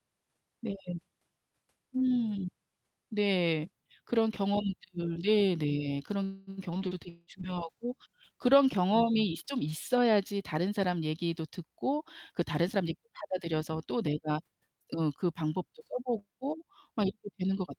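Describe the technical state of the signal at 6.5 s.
At 6.5 s the signal is just leaving a call audio freeze that runs from 6.25 to 6.50 s. Packets were likely held up in transit, so the jitter buffer ran dry and the receiver stretched the last sound into a fading buzz for about 217 ms. Nothing is lost. The speech resumes where it stopped, now about 217 ms later. On a spectrogram this shows as a smeared, repeating band that fades, with the codec's content stopping near 12 kHz. The waveform shows a decaying, periodic stretch rather than silence.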